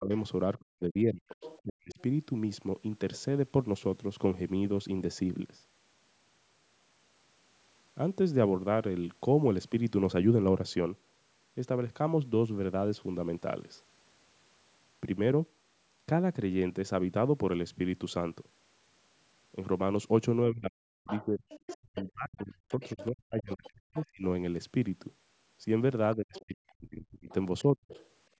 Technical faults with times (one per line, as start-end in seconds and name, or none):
0.00-1.99 speech suppressed in double talk
1.41-2.02 other side's voice leaking through
20.50-24.23 speech suppressed in double talk
21.07-24.06 other side's voice leaking through
26.14-26.45 other side's voice leaking through
26.16-27.92 speech suppressed in double talk
27.29-28.09 other side's voice leaking through